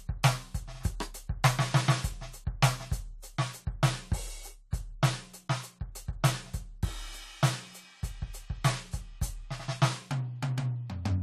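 At 4.71 to 4.73 s, pre-echo: a short hiss about 21 ms long runs before a sharp attack in the music, where transform-block quantisation noise spills ahead. Unlike reverb, it leads the hit.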